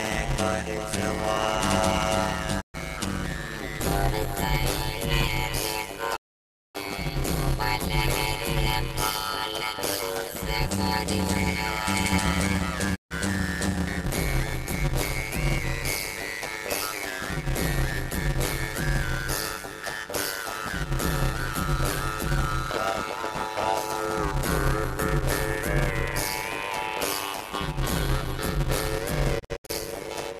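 Block size mismatch (padded) runs throughout. Each block carries only part of what the next stage reads, and the rest is zero-filled. That fits 256-sample writes. The gaps cause a 100 Hz buzz, and the audio plays at 0.533 times normal speed at about its normal pitch.

Digital broadcast dropouts follow at 2.60–2.76 s, 6.15–6.77 s and 12.94–13.13 s. The receiver lost valid frames and muted, fading out over 20 ms. The longest hole wipes 576 ms of programme. At 29.38–29.71 s, 168 ms vanishes in scattered holes, the longest 72 ms.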